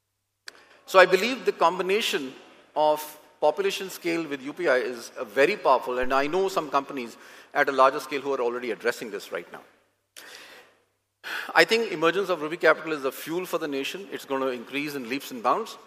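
At 6.03 s a phantom power thump lands: a supply switched on or off on the live input sends a step through the coupling capacitors, producing a deep thump peaking at about -22 dBFS and decaying over roughly 100 ms.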